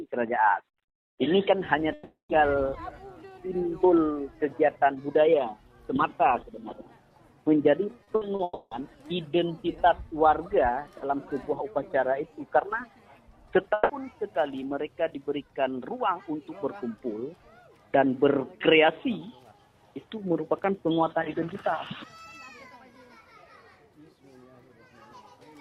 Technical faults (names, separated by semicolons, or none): long network dropout; short concealed packet loss; burst of packet loss